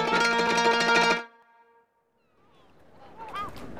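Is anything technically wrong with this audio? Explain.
Yes, there's audio missing between chunks at 0.48, 1.43, 2.38 and 3.33 s, roughly once a second. It's likely a recorder dropping a short slice, around 50 ms, at each chunk boundary, then butting the ends together, so the sound skips abruptly each time.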